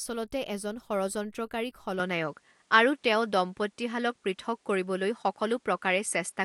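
At 2.00 s the sound changes abruptly and stays changed to the end, with no gap at the switch. Nothing above 11.4 kHz remains, the level shifts by around 5 dB, and a new noise floor appears some 45 dB down. The likely cause is an input switched to a poorer device.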